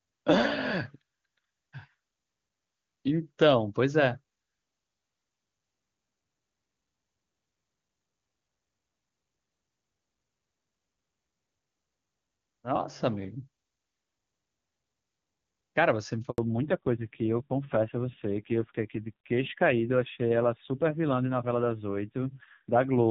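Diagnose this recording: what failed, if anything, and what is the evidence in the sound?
A handover gap at the network stage cuts the speech off abruptly at 16.30 s and leaves silence until 16.38 s, 80 ms in all. The call was moved between networks, and no speech frames were delivered during the switch, so that stretch is simply lost.

From 16.38 s to the end, the codec stage shows a fallback to narrowband. Before it, the speech has clean HD Voice bandwidth, consistent with AMR wideband near its top rate, 23.85 kbit/s. Afterwards, nothing above 4 kHz remains, and the speech turns dull and rough, which fits AMR-NB at a low rate such as 5.9 kbit/s.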